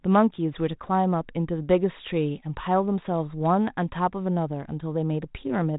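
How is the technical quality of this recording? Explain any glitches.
No glitches; the speech sits on a G.726 ADPCM path at 32 kbit/s, band-limited to 3.8 kHz with light coding texture.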